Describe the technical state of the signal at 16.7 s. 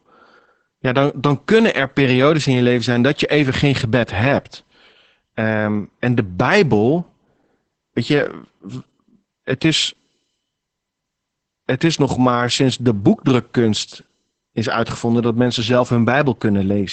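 At 16.7 s you're hearing the same Opus voice compression that runs through the whole clip. The linear-prediction coder is squeezing the speech hard, which fits about 10 kbps, so it sounds muffled, hoarse and a bit robotic, with nothing above 8.8 kHz.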